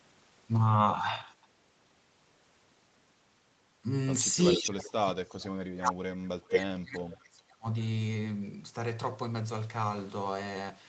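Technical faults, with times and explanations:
4.56–7.66 s, speech suppressed in double talk: the speech dips, by as much as roughly 35 dB at the deepest point, for about 3 s in total. This is likely an echo canceller that could not tell the near talker from the returning far-end audio and so attenuated both.
4.65–4.71 s and 6.53–6.58 s, echo leak: two short scraps of delayed speech appear, lagging the original by about 440 ms and 450 ms. The first is about 5 dB below the direct speech and the second is at roughly equal level. This is likely loudspeaker pickup that the canceller failed to remove.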